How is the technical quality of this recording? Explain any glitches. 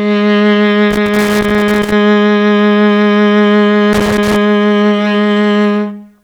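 The music is interrupted twice by irregular bursts of crackle and scratching, from 0.91 to 1.92 s and again from 3.93 to 4.36 s. This is loose connector crackle: a worn or dirty contact rapidly makes and breaks as it shifts, chopping the signal.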